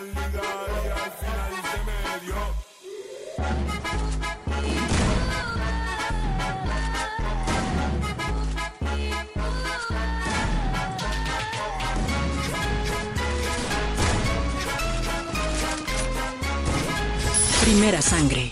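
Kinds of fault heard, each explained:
No technical faults can be heard anywhere in the audio.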